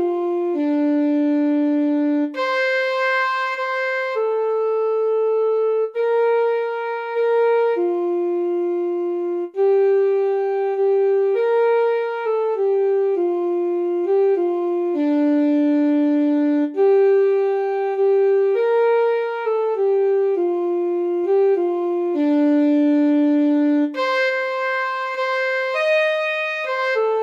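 No technical faults can be heard anywhere in the audio, and the signal holds steady throughout without any break or disturbance.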